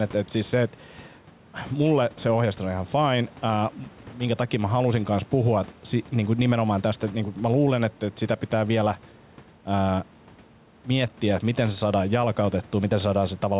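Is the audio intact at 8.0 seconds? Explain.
No. At 8.0 s, as throughout, the gain swings by around 5 dB as each loud sound pulls it down: gain pumping, likely from excessive gain driving a fast limiter.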